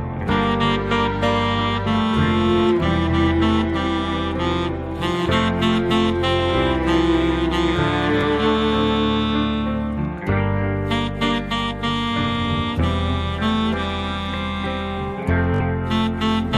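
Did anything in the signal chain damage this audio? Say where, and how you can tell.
Yes. The damage happens on the Bluetooth wireless link, as Bluetooth stutter. At 8.21 to 8.23 s a short slice repeats for about 20 ms, and at 15.54 to 15.61 s a longer run of repeats lasting about 61 ms gives a brief buzzing stutter. When packets arrive late or not at all, the receiver replays its last buffer, and the sound then resumes further on as if it had kept playing. The gaps fit one lost packet and then roughly three in a row.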